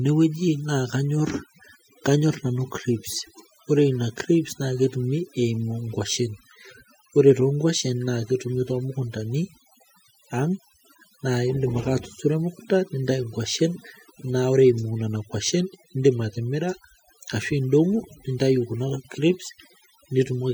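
Overdone noise removal runs through the whole speech clip. The noise reducer was set so aggressively that frequency bands near its noise estimate are pulled down or switched off, taking quieter voice detail with them: the background drops and breaks up into twinkling specks.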